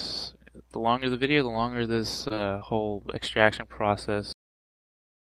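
Between 1.53 and 2.63 s there are scattered short gaps: a few packets, roughly three, went missing or arrived too late. The receiver covered each hole by extending the sound just before it, so instead of silence you hear brief ticks, smears or small hiccups, the longest only about 30 ms. Unlike a single long dropout, these are spread out, and the audio stays mostly clear between them.

At 4.33 s the clip has a cut-off end. The final buffers were never written out, so playback halts partway through a sound and drops straight to digital silence. There is no tail or decay, which separates it from a natural ending or a fade. Because nothing resumes afterward, it is a truncation rather than a momentary gap.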